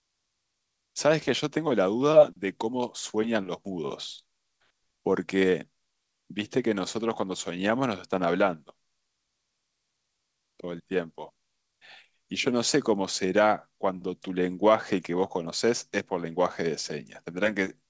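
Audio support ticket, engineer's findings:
No faults found in the speech; the call path is audible as band-limiting with nothing above 8 kHz, plus the codec's usual coding noise, consistent with a G.722 wideband codec at around 64 kbps.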